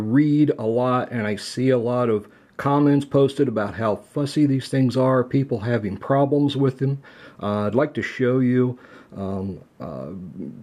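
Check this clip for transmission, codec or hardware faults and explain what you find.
Listening through the recording turns up no transmission, codec or hardware problems; the signal stays continuous and stable throughout.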